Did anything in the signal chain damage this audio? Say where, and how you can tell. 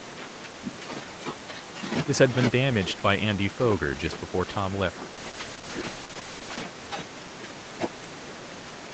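Yes. A call bitrate drop in the network and codec stage: from 5.16 to 6.76 s the speech turns coarse and watery, worst for about 1.5 s. That fits the encoder being throttled from roughly 32 kbps to 9 kbps after the bandwidth estimate collapsed.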